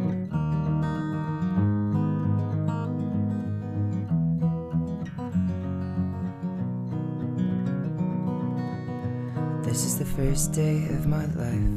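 Nothing technically wrong turns up anywhere in this audio, so there's nothing here to flag.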